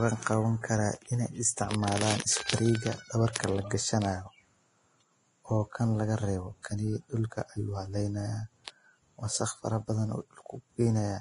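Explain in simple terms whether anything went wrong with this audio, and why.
The whole clip sounds hissy and grainy, with nothing above about 10.6 kHz, so the speech is dull up top and fizzy where the fine detail should be. That's very likely heavy Vorbis compression, which swaps fine treble detail for a smeared wash of noise.

Around 3.33 to 3.35 s there's pre-echo: a short hiss creeps in just before a sharp attack, and the attack itself sounds softened. The codec spread its noise across a whole chunk of audio, so it leaks ahead of the sudden sound.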